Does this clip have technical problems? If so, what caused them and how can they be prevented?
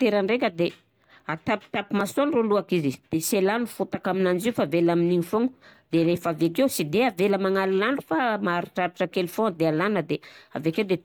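Yes. At 2.01 s the speech has a click, almost a brief buzz, rather than an audible stutter. This is a repeated buffer: new audio didn't reach the playback device in time, so it played the last 1.33 ms piece once more before continuing. The hard join at each end of that duplicate causes the click, and so short a piece fits a 64-sample buffer. Essentially nothing was skipped. Using a larger buffer, or giving the audio thread higher scheduling priority, would prevent it.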